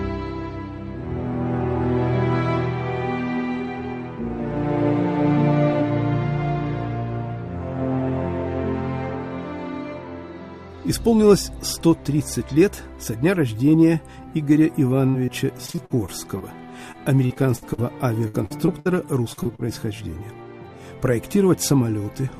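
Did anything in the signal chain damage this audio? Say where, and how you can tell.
Yes, the damage happened on the network, and the sound after 15 s shows it. A burst of packet loss at 15.09–15.16 s is patched with about 45 ms of continued, fading sound, and about 40 ms of real audio never returns. On a spectrogram, frozen harmonics or noise fade, then jump to new content.

A short concealed packet loss follows at 15.26–15.30 s: about 16 ms of synthesized sound bridges a 20 ms hole, so it is heard as a brief smear or wobble. A waveform would show a few repeated, slightly softened cycles cross-fading into the real signal.

Repeated packet loss (robotic sound) fills four stretches: 15.66–16.42, 16.92–17.80, 18.28–18.87 and 19.33–19.66 s. Each has four to six dropouts, the longest about 60 ms, and concealment covers 20–36% of each span. The spectrogram shows a comb-like chop of smeared, flattened patches. 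The result is choppy sound with pieces missing.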